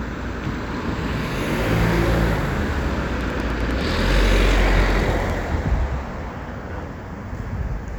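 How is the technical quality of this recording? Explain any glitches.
The recording has one clear glitch. From 3.21 to 5.31 s, a train of clicks ticks at a steady 10.1 per second, about twenty near-identical pulses roughly 10 dB above the sound. They likely come from electrical interference or a faulty connection or power supply. Their even spacing and matching shape set them apart from random crackle.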